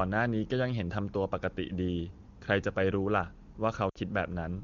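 A speech recording in which, from about 3.90 to 3.98 s, the sound briefly smears into a held tone that quickly thins out before the voice returns, slightly rough for an instant. These are lost AMR speech frames: corrupted frames were discarded and the decoder stretched the last good pitch and vocal tract settings at falling gain, about 60 ms in all, which fits three consecutive 20 ms frames. The codec is AMR wideband (HD Voice), and its clarity points to a high-rate mode.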